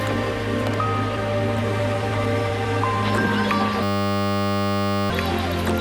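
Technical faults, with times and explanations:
3.83 to 5.1 s: system hang loop. The system stalled while playback kept cycling one 10 ms slice of the ring buffer, repeating it 127 times at 100 Hz, so a steady buzz replaces the audio and roughly one and a half seconds of sound never arrives.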